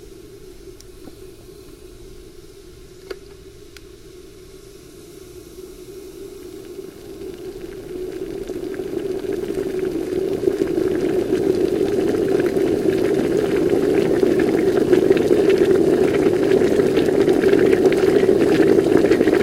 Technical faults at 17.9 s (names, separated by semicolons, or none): none